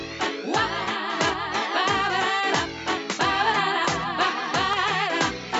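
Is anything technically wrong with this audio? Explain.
Yes. From 0.84 to 0.88 s there is a corrupt frame concealed: flipped bits damaged the AAC stream, and the decoder covered the loss itself. The concealed span is about 36 ms, consistent with two damaged frames.

At 1.29, 3.85 and 4.73 s there are single sharp clicks, each a thin vertical line across the spectrum. The likely cause is dropped samples: a fraction of a millisecond missing, so the waveform jumps abruptly to a later value.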